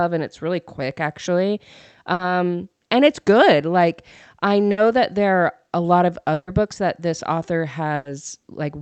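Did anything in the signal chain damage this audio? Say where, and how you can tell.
Yes: bursts of packet loss on the network, at 2.13, 4.71, 6.33 and 7.95 s, 60 to 140 ms each. Concealment holds the last sound as a fading buzz or hiss, then skips ahead. Spectrograms show smeared, decaying bands ending in a hard seam.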